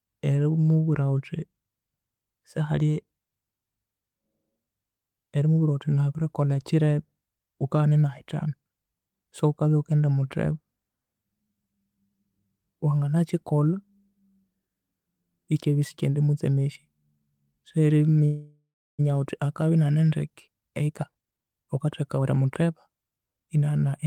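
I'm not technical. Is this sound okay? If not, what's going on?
No. From 18.25 to 19.01 s there is a call audio freeze: the last sound stretches into a fading buzz, then about a third of a second of silence, likely because network packets arrived late. Unlike a dropout, nothing is lost, and the speech resumes exactly where it stopped.

From 20.30 to 23.48 s a jitter buffer speed-up makes the speech run about 23% fast, trimming roughly seven-tenths of a second as the call catches up. Unlike a sped-up recording, the pitch stays the same; it just sounds hurried.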